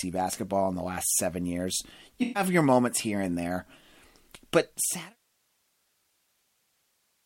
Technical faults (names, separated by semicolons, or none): AAC frame loss with concealment